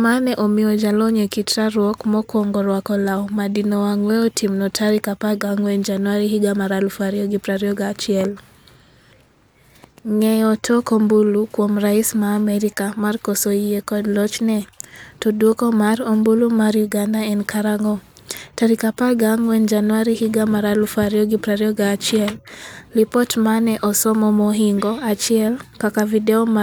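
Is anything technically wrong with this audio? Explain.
Yes. From 21.28 s to the end, the resampler restarts on every block. Each 40 ms block is converted from 48 kHz to 44.1 kHz in isolation, so its edges see false neighbouring samples. The result is a 25 Hz ticking buzz under the speech, visible as evenly spaced vertical lines on a spectrogram and small discontinuities at each block edge in the waveform.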